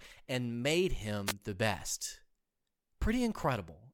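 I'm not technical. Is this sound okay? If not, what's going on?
No. At about 1.26 seconds the radio link from the wireless microphone to its receiver briefly faded, most likely because reflected radio waves cancelled the direct signal. That produced a wireless microphone noise hit: the receiver's background hiss swelled, so you hear a short swish of static, about 70 milliseconds long, right after "and made" and just before "the best."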